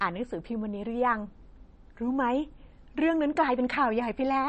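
Throughout the speech, an encoder short of bits has cut everything above 8.3 kHz and zeroed weak frequency lines that flicker between frames. That points to likely MP3 compression at a low rate, around 32 kbps, and sounds plainly dull, watery and swirly, with smeared attacks.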